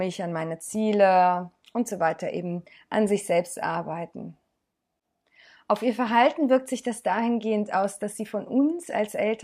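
No technical faults can be heard anywhere in this recording.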